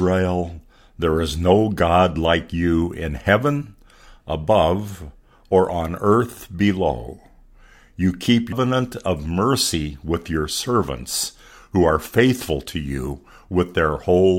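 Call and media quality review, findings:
Damaged data in a compressed stream at 8.52 s, just before "of mercy with your". Probable component: decoder input. Corrupted bytes break frame sync. Decoder discards bad frames, resumes at next valid header.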